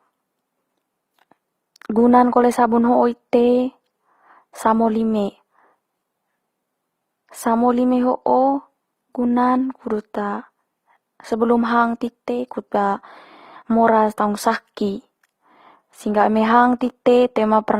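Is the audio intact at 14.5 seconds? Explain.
No. At 14.5 seconds, as across the whole clip, the speech shows transcoding between lossy codecs, likely a low-rate HE-AAC encode near 20 kbit/s followed by a second pass through Opus near 32 kbit/s. The second encoder wastes bits faithfully reproducing the first encoder's damage and then adds its own, so two different flavours of coding artefact are heard layered together, and the lowest cut-off in the chain remains.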